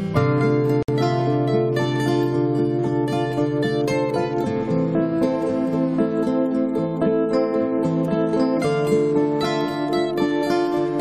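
Load changes in the computer are shifting the shared ground of the audio circuit, so computer activity noise runs through the whole clip: a buzzing, chirping pulse at around 200 Hz, roughly 30 dB below the sound, rising and falling with the machine's activity rather than with the audio. From 0.83 to 0.88 s, two separately encoded pieces were joined without trimming the encoder's start delay and end padding, leaving a gap at the join of encoded pieces. A gap of about 59 ms cuts into the continuous sound with smeared edges, and the audio then resumes from where it stopped.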